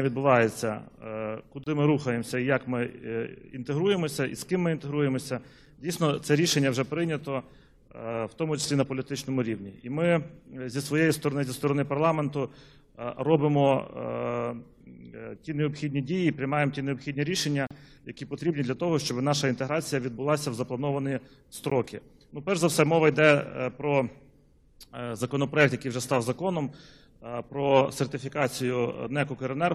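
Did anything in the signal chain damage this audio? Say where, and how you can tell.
Yes, there are gaps between stream segments at 1.64–1.67 s, 5.66 s, 17.67–17.71 s and 21.70 s. These are hard-edged silences of 6 to 38 ms on a 4-second segment grid, a playback fault: segment timestamps leave holes, which the player fills with silence.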